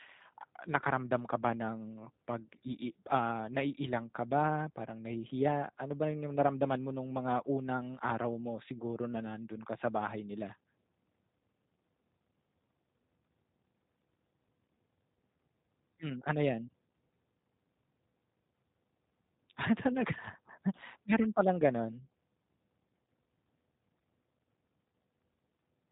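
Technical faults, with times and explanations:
Throughout, G.729 codec: the speech passes through a low-bitrate voice codec, which fits 8 kbit/s G.729A. Nothing above 4 kHz survives, so it sounds dull and boxed in. Each 10 ms frame is rebuilt from a vocal tract model and a few pulses, so it comes across plainly rough and synthetic.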